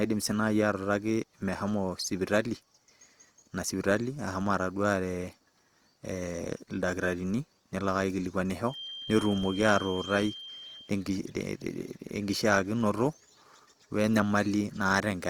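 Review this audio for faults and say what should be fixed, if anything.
The whole recording carries Opus compression damage, plainly audible as a grainy, rough texture on the speech rather than the swirling, watery holes of MP3. The codec's music (CELT) mode keeps each band's energy and fills starved bands by folding lower ones or with noise. The bandwidth stays full, reaching about 20 kHz, so the roughness points to a bitrate around 24 kbps and not to a narrowed band. Encoding at a higher bitrate would prevent this.

From 8.64 s to 10.96 s a feedback whistle sits at 3.2 kHz: a thin, steady tone well below the speech that swells and fades slowly in level. It is likely a loudspeaker-to-microphone loop held just short of runaway, which is why it neither grows into a howl nor stays fixed and low like mains hum. Lowering monitor gain, moving the microphone away from the speaker or notching 3.2 kHz would prevent it.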